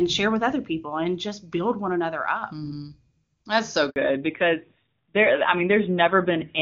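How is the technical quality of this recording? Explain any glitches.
The first part of the clip is clear wideband speech, with faint or no damage from the HD Voice (AMR-WB) codec. Two faults arrive together near the four-second mark.

At 3.90 s there is a handover gap. The call switched networks, and no speech frames came through for about 60 ms. The voice fades out quickly and stays silent until 3.96 s. Whatever was said in that instant is lost. It sounds like a short, hard dropout.

From 3.96 s to the end there is a fallback to narrowband. The call left the HD Voice codec for an older narrowband one, and the sound suggests a low rate, likely around 7.4 kbit/s. Nothing above 4 kHz survives. Sibilants lose their edge and the voice turns duller and rougher. It sounds boxier, like an old phone line.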